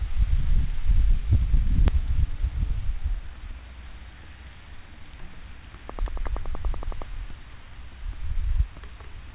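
A recording of everyday sounds carried over a call link, band-limited to 4 kHz. At 1.88 s the receiver threw away a stretch of queued audio while newer audio was already waiting. This skip ahead jumps forward with no fill, so roughly 0.7 s of sound vanishes and the two sides are spliced almost directly. From 1.98 s to 3.69 s the jitter buffer, still holding more audio than it wanted, trimmed short pitch-period pieces again and again to shed about 0.1 s of delay. That jitter buffer speed-up makes the sound run about 6% fast at unchanged pitch, giving a slightly hurried feel. From 5.90 s to 7.03 s a train of clicks sits over the audio: about 15 similar pulses at a regular 10.7 per second, peaking about 5 dB above the sound. The likely cause is interference from nearby equipment or a faulty connection or power supply injecting pulses.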